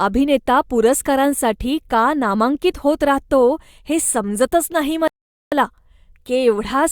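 At 5.08 s the speech cuts to dead silence for about 0.44 s, then resumes at 5.52 s exactly where it left off, with nothing skipped. This is a rebuffering stall: playback drained its downloaded audio and paused until more data arrived, adding 443 ms.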